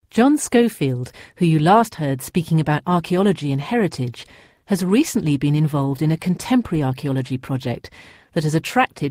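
Nothing in this bit of speech stands out as a technical problem; it just runs along without a hitch.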